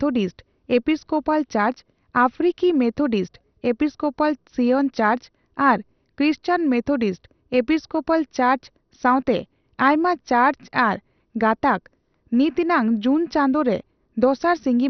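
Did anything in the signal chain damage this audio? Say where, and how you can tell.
Yes. The damage sits at the codec stage and runs through the whole speech clip. Nothing survives above about 6.2 kHz, so the sound is dull. A gurgling, granular roughness rides on the speech, and the top bands seem to flicker in and out. The likely cause is heavy MP2 compression, which fits a low rate near 48 kbps. Short of bits, the encoder shuts off its upper sub-bands and coarsely quantises the ones it keeps.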